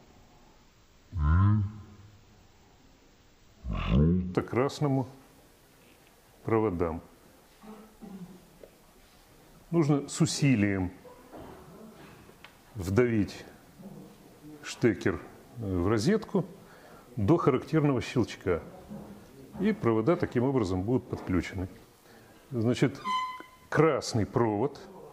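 From 0.0 to 4.35 s the audio plays at half speed and an octave low, the signature of a stereo read as mono fault: left and right samples are taken in turn as one channel. Unlike a plain sample-rate mismatch, a fainter mirrored copy also appears in the upper spectrum.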